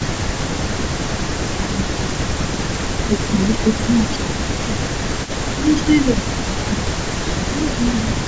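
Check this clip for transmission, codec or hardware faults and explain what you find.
Two related faults run through nearly the whole recording: an echo leak and speech suppressed in double talk. Both point to a call where one end uses a loudspeaker.

Echo leak, 0.0 to 1.03 s, 1.38 to 3.74 s, 4.25 to 5.65 s and 6.01 s to the end: a faint copy of the speech trails it by 152 ms, roughly 20 dB below the direct sound. The likely cause is an echo canceller failing to strip the loudspeaker's output from its microphone, so that output is sent back. The fixed, discrete delay separates it from room reverberation, which smears into a smooth decay rather than repeating.

Speech suppressed in double talk, 0.2 to 1.9 s, 2.25 to 2.46 s, 3.06 to 5.07 s and 5.54 s to the end: the main talker's level sinks, by around 15 dB at its deepest (about 10 dB in the short 2.25 s dip). This is likely the canceller, unable to tell the local voice from the echo, turning both down together. 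Unlike packet loss, the dips come while the far side is playing instead of landing at random. The call's microphone high-pass and the 8 kHz upper limit are ordinary call-path behaviour.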